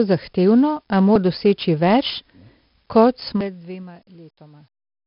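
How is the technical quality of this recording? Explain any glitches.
Quality is poor: heavy codec damage runs through the whole recording, and a stepped fade near the end adds audible ticking.

The 4-bit ADPCM compression is present from start to finish. Each sample is coded as a coarse 4-bit step from a predicted value, so the error becomes broadband noise that tracks the speech level. You hear a gritty hiss on every loud syllable and roughness on sharp onsets. Nothing survives above 5.3 kHz, which fits a sample rate near 11 kHz and roughly 44 kbps. On a spectrogram the energy stops at a hard ceiling, with a noise haze filling the gaps between harmonics.

Zipper noise runs from 3.26 to 4.05 s while the level falls by roughly 20 dB. Instead of gliding down, the gain drops in 2 dB jumps about fifteen times a second, with no smoothing between steps. Each jump puts a small discontinuity in the waveform, heard as a rapid ticking or zipping riding on the speech. 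The waveform envelope shows a staircase rather than a ramp, and the spectrogram shows faint vertical lines at each step.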